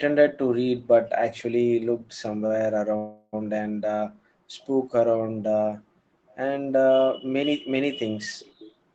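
From 1.97 to 2.17 s the echo canceller clamped the microphone while the far end played, so the background is gated, dipping by about 40 dB for roughly 150 ms. At 2.46 to 2.52 s a late packet left the jitter buffer empty, causing a short stall: the receiver held the last sound for 37 ms, with nothing lost. From 2.97 to 3.35 s a call audio freeze, likely from packets delayed in transit, stretches the sound into a fading 358 ms fill, including about 30 ms of silence, before resuming where it stopped. In two places the echo canceller, most likely with the other side on a loudspeaker, let some of its microphone pickup through, producing an echo leak. At 6.31 to 6.36 s a faint copy, about 35 dB down, trails the speech by 506 ms. At 8.39 to 8.73 s a stronger copy, about 25 dB down, arrives 507 ms late. Throughout, the Opus call path limits the speech to 8 kHz.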